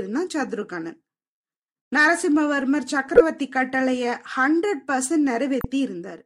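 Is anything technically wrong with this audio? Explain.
Yes. The speech has two corrupt frames decoded. The first runs from 3.16 to 3.21 s and spans a couple of frames. The second runs from 5.60 to 5.65 s, spans several frames and adds about 19 ms of extra time. Flipped bits reached the decoder, which played the frames anyway. Misread gains or codes put energy at the wrong frequencies. Each event is a short chirp, squeak, blip or noise burst. The first is louder.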